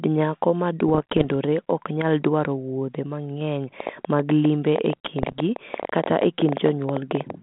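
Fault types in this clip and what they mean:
Bit errors on an ADPCM link: Rough, popping bursts with brief jumps in level, from 0.88 to 1.25 s between "nyako ma" and "ok nyal dwaro wuodhe", and again from 5.22 to 5.38 s. Flipped bits on the 32 kbit/s G.726 link throw the decoder's step size and prediction off, so each error rings on briefly.
Train of clicks: Irregular ticking over the speech from 3.80 to 7.31 s, starting after "nyal dwaro wuodhe mang'eny", at about 11 clicks a second, some forty in all, peaking around 10 dB above the speech, pauses included. The likely cause is interference from nearby equipment or a faulty connection or power supply.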